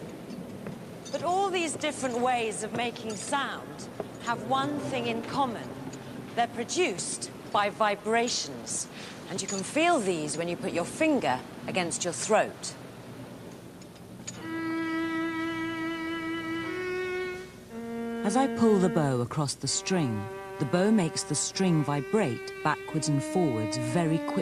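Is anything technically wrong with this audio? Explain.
No, nothing is technically wrong with this audio.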